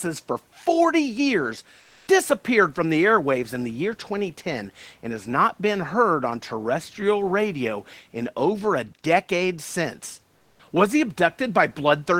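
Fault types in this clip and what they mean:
Comfort noise in place of the background: at 1.81 and 10.37 s, the room noise turns briefly smooth and featureless, likely discontinuous transmission filling pauses with synthetic noise.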